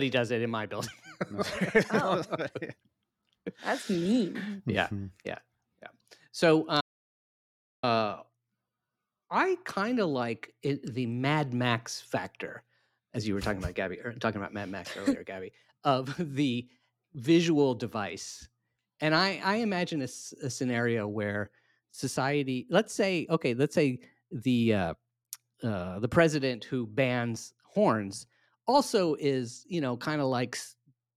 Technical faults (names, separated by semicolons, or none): audio dropout to silence